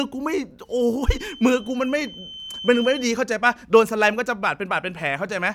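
A speech clip with a feedback whistle from 1.11 to 3.11 s: a thin 3.1 kHz tone some 15 dB below the voice, swelling and fading slowly, likely from a loudspeaker-to-microphone loop poised at the edge of feedback. A spectrogram shows one narrow horizontal line there.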